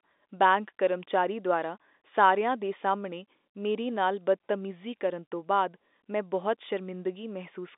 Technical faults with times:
none

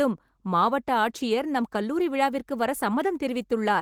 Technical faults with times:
none

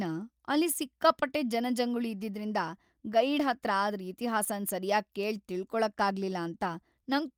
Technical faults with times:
none

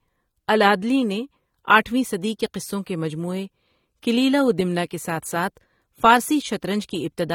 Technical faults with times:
0.00-7.35 AAC compression

